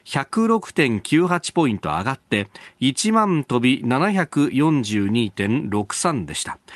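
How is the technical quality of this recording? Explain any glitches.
The speech carries no glitches or faults, and the audio shows the ordinary character of a call codec path, with content extending up to about 12 kHz and the usual coding texture of a moderate-bitrate setting.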